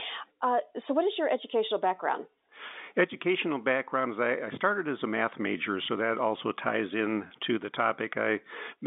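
At 7.28 to 7.30 s, between "that also ties in" and "to the", there is a brief packet loss with pitch repetition. About 20 ms of audio went missing, which fits a single lost 20 ms packet, and the receiver filled the gap by looping the last pitch period before resuming. Because the gap is so short, it sounds like a slight hold on the voiced sound, a faint buzzy sustain. The G.711 telephone coding keeps the audio within the 200 Hz to 3.7 kHz telephone band.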